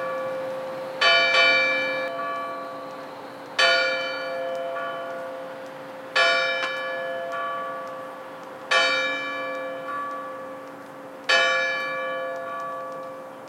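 From the first moment until 2.08 s, a doubled audio track is heard. Every event in the sound returns a second time, roughly 300 ms later, at about the same level as the original. The repeat is full-band and dry, with no decay or room colour. The likely cause is a second, slower capture path mixed in alongside the first. At 2.08 s the copy stops abruptly.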